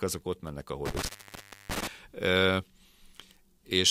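From 0.86 to 1.87 s there is an intermittent contact. A loose connection opens for about 650 ms. The speech cuts out with crackle, leaving faint hiss.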